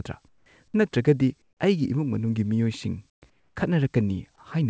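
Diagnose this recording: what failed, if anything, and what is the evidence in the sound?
The speech pauses carry comfort noise in place of the background. This is a call-processing fault. Between 0.28 and 0.46 s, 1.42 and 1.60 s, 3.10 and 3.22 s, and 3.30 and 3.56 s, the room tone gives way to a flat, featureless hiss. It drops by about 10, 9, 22 and 6 dB. The likely cause is discontinuous transmission. The sender goes silent in pauses, and the receiver synthesises shaped noise. The path above 8 kHz is empty, which fits a G.722 call codec.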